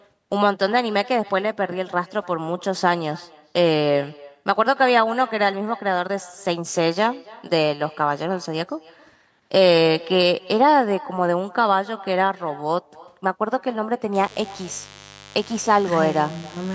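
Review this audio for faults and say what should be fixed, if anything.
Every phrase in the speech is trailed by a faint, hollow copy of itself, arriving roughly a third of a second later and sitting about 22 dB below the direct sound. This is echo with no canceller: the far end is playing the call through a loudspeaker, its microphone picks that playback up, and nothing strips it out before it travels back across the network. To prevent it, enable acoustic echo cancellation on the far-end device or have that participant use a headset.

From 14.14 s to the end of the clip at 16.75 s, a steady, raspy buzz appears underneath the speech, about 20 dB below it. This is mains buzz at 50 Hz. Sharp switching spikes from something like a dimmer, a rectifier or an unshielded cable enter the signal twice per mains cycle, so the harmonics stack up into a gritty tone rather than a smooth hum. Within the call's 8 kHz bandwidth, the harmonics reaching up to several kilohertz are kept. 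To prevent it, find whatever switched on at that moment, move the audio cabling away from it, and use shielded, properly grounded connections.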